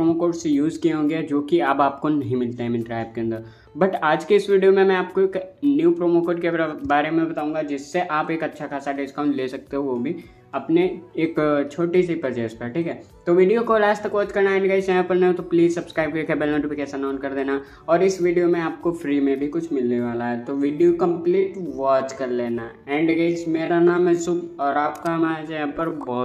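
At 19.87 s the pace suddenly slows to about 0.68 times speed through to the end. This is a time-stretched section. Pitch holds, but the sound drags, likely from software repeating short pieces to lengthen it.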